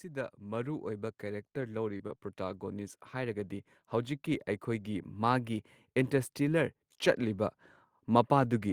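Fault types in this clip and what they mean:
Automatic gain rising: from 0.05 s to about 5.54 s the level climbs by about 9 dB. The gain control judged the incoming signal too quiet and kept turning it up. Because it acts on the whole input, the speech and the background noise swell together over several seconds rather than the voice alone getting louder. The slow, steady creep upward is what marks this as gain control and not a change in how the talker is speaking.
Lost packet rebuilt from error correction: short 20 ms patches at 1.53, 1.61, 1.99, 2.09 and 2.53 s. Each lost packet was restored from the lower-bitrate copy carried in the following packet, so nothing drops out. The stand-in frames are coarser, though, giving brief moments of rough, grainy, slightly noisy speech in place of the clean signal. They cluster in the first half of the clip.
Short concealed packet loss: at 1.97 to 2.01 s and 2.07 to 2.11 s, 20 ms of audio failed to arrive in time at each point. 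The receiver covered the hole by extending the preceding sound, following its pitch if voiced or using shaped noise if not, for 20 ms and then 16 ms before blending back. The result is a fleeting smear or wobble, and each one runs straight into a rebuilt packet.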